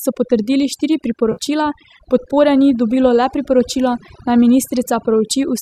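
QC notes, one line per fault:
Throughout: overdone noise removal. Over-aggressive noise reduction cuts frequency bands near its noise estimate, leaving a lowered background broken up into twinkling specks.
1.32 to 1.39 s: AAC frame loss with concealment. About 60 ms of data is missing, bridged by the decoder from the last good spectrum, giving a brief smeared, phasey patch.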